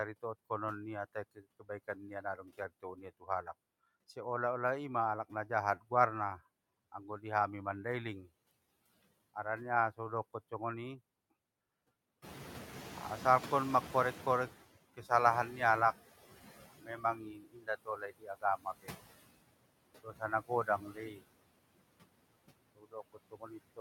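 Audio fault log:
Throughout: noise suppressor artifacts. The room noise is pulled down by about 20 dB in the gaps and swells back under the voice, frame by frame. The suppression lowers whatever it takes for steady noise, frame by frame, which sets it apart from the catching-up lag later in the clip.
1.15–1.63 s, 2.22–3.47 s (ending just before "seolah olah ima alak"), 16.83–18.95 s, 20.03–21.22 s, 22.75 s to the end: speech cut by the noise suppressor. Inside these spans the suppressor mistakes quiet parts of the speech for noise and turns them down along with the background. The deepest drops are about 14, 15, 21, 19 and 20 dB. The affected portions add up to roughly a tenth of a second in the first span, about a third of a second in the second, about a second in the 16.83 s span and about half a second in the 20.03 s span. Soft consonants and endings come out swallowed or faint. The speech itself is turned down along with the background.
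12.22–14.79 s: noise suppressor catching up. Just before this the room noise rises by about 15 dB, to about 13 dB below the speech. The suppressor's noise estimate is still set to the old, quieter level, so the louder background comes through with little reduction at first. Over about 2.57 s it settles to about 15 dB of cut. Unlike the frame-by-frame rise and fall heard across the whole clip, this is a single slow fade-down that follows a change in the noise.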